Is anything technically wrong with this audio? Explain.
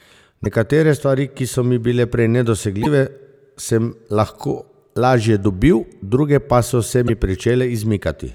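Yes. Damaged data in a compressed stream appears at 0.41–0.46 s, 2.81–2.87 s (just after "so mi bile prej") and 7.04–7.10 s. Corrupted bytes make the decoder misread frames and resynchronise at the next header, leaving roughly 55 ms glitches in the speech.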